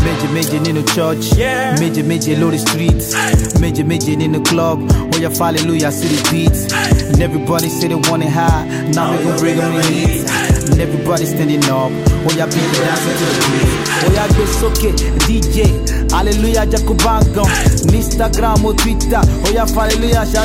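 At 5.27 s there is a repeated buffer: new audio failed to arrive in time, so the last block, about 1.3 ms long and consistent with a 64-sample buffer, played once more. With so short a block, the hard joins come across as a single click, and a millisecond or two of audio is lost.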